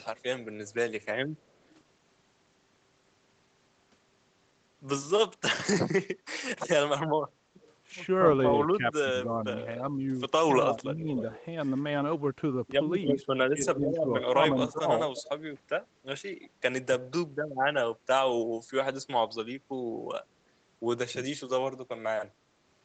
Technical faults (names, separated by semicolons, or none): echo leak; speech suppressed in double talk